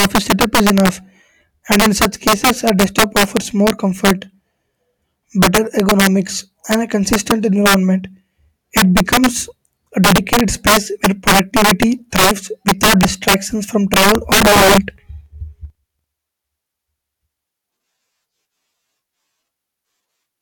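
Throughout the speech, the louder syllables break into violent, snapping cracks, far harsher than ordinary clipping, while quieter passages pass cleanly. This is integer overflow: the signal is driven about 11 dB too hot, and a few percent of samples exceed the largest integer value. Instead of being held at the limit, those samples wrap around to the opposite sign, so each overloaded peak jumps across the entire range and produces a sharp crack.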